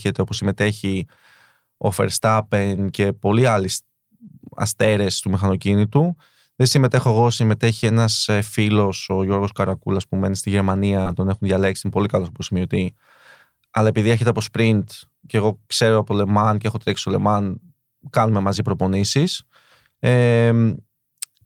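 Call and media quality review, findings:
Short concealed packet loss at 11.01–11.07 s, right after "που μένει στη". Brief smear in the speech. Component: receiver jitter buffer and decoder concealment. About 40 ms never arrived in time. The decoder extended the preceding sound to cover the hole, then crossfaded back into real audio. A short consonant there may be blurred or missing.

Lost packet rebuilt from error correction, 11.05–11.11 s, overlapping the end of the concealed gap following "που μένει στη". Roughly 40 ms sounds coarser and noisier, with no silence. Component: Opus in-band FEC in the decoder. The spacing fits two lost packets. Each one's low-bitrate copy arrived in the next packet and was played instead. That leaves the grainy texture.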